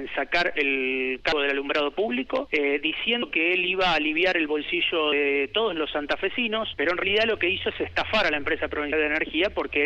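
The audio skips four times, at 1.32, 3.22, 7.02 and 8.92 s. Each time about a tenth of a second is lost, and the two sides are butted together with no gap. This is likely audio missing between chunks, with 2-second chunks dropping material at each changeover.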